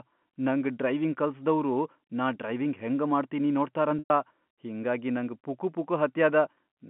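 From 3.99 to 4.10 s, between "ನಾ ಡ್ರೈವಿಂಗ್ ಹೆಂಗ ಮಾಡ್ತೀನಿ" and "ಹಿಂಗಾಗಿ ನಂಗ್", 110 ms of packets were lost. Packet loss with pitch repetition fills the gap by replaying the last pitch cycle, so a brief buzzy hold fades to silence before speech cross-fades back in over the narrow G.711 telephone band.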